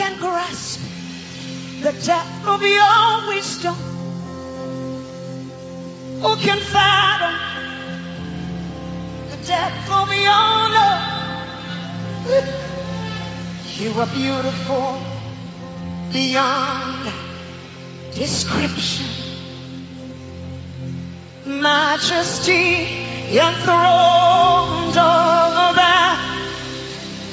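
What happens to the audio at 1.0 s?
Nothing goes wrong at 1.0 s; the audio runs through that moment intact, with no dropout, click or distortion.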